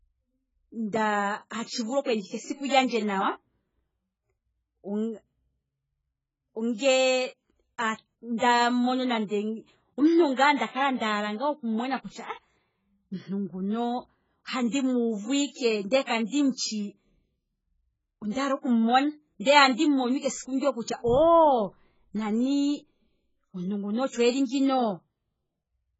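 AAC compression, heavy and present from start to finish: nothing reaches above about 7.6 kHz, so the speech sounds dull and closed-in, and sibilants turn fizzy and smeared while sustained vowels carry a watery warble. This is likely the work of an AAC-LC encoder starved of bits, which fits a very low rate near 12 kbps. It drops the top band entirely and leaves gaps or noise-filled patches in the quantised spectrum.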